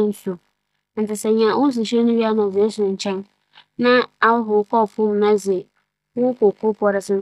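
No technical faults can be heard anywhere in the speech recording.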